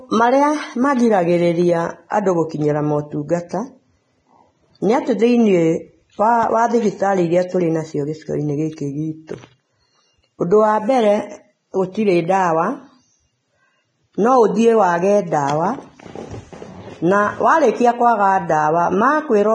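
Vorbis compression runs through the whole speech clip: nothing sounds above about 9.7 kHz, and the treble below that edge is hissy and grainy, with consonant attacks blurred. This is likely heavy Vorbis coding at a low bitrate, around 20 kbps. The codec keeps a smooth outline of the spectrum and quantises the fine upper detail so coarsely that it turns into noise of similar energy, which roughens the tone throughout.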